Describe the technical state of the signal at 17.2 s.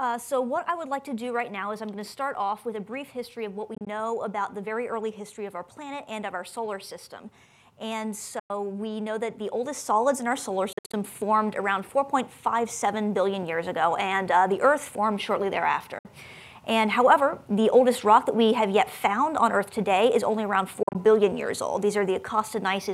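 At 17.2 s the signal is intact, with no fault present at that moment.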